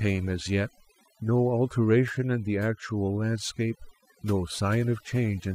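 From the start, the speech carries overdone noise removal. A noise reducer was pushed too hard on a noisy recording. It cuts individual frequency bands deep whenever they sit near its noise estimate. The quiet parts of the voice fall into those cuts too. Between phrases the background drops and breaks up into twinkling specks.

At 3.20 s, sample clock jitter appears and lasts to the end at 5.54 s. The converter's clock wobbles, so each sample lands a little early or late. The timing error is a few microseconds. Its effect scales with how steeply the waveform moves. The result is a hiss or roughness roughly 35 dB below the signal. It grows on loud and bright sounds and disappears in the pauses.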